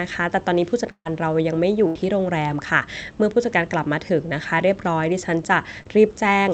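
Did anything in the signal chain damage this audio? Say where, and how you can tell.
Yes, at the network stage. There's a burst of packet loss at 0.91–1.07 s and another at 1.87–1.97 s. The receiver stretches the last sound to cover about 140 ms and then 80 ms, fading it, the first trailing into roughly 60 ms of silence, before speech resumes further on.

There's also a short concealed packet loss at 5.83–5.87 s, again from the network. About 20 ms never arrived in time, so the decoder patched it by extrapolating the preceding sound and crossfading back, leaving a brief smear in the speech where a tiny slice is missing.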